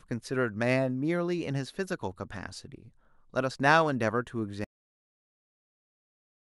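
At 4.64 s the speech stops abruptly mid-sound and falls straight into digital silence, with no decay, for the remaining 1.9 s. This is a cut-off end: the final buffers of audio were never written or played back, so the recording simply ends there.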